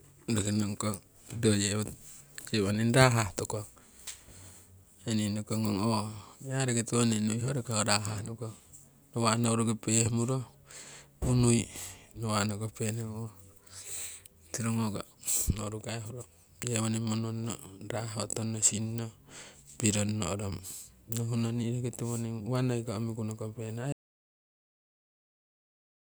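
At 23.92 s the speech cuts to total silence through the end. This audio dropout to silence most likely reflects lost input, with silence recorded instead.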